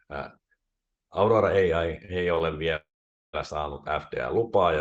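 At 2.34 to 2.39 s the speech briefly holds a sound too long, with a faint buzzy smear. This is a short stall from a late packet: the packet missed its slot, the jitter buffer emptied, and the receiver stretched the previous sound for about 24 ms before resuming where it left off, with nothing lost.

From 2.76 to 3.35 s the audio freezes. A fading buzz trails into roughly half a second of silence, then the speech picks up exactly where it stopped. This call audio freeze was likely caused by packets held up in transit. The jitter buffer drained, and the receiver filled 573 ms while waiting, so the gap was inserted rather than any speech dropped.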